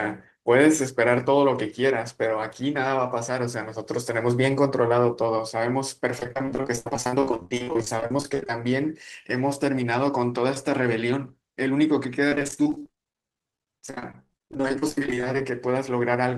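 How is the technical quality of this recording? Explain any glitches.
The recording is marred by repeated packet loss, producing robotic sound in two stretches, from 6.19 to 8.53 s and from 12.29 to 15.41 s. Dozens of brief dropouts, none longer than about 50 ms, arrive in quick succession, and the receiver fills each by stretching the last sound, covering roughly two-fifths of each stretch. The speech turns choppy. A spectrogram shows smeared, repeated frames, and the waveform shows a broken, stuttering envelope.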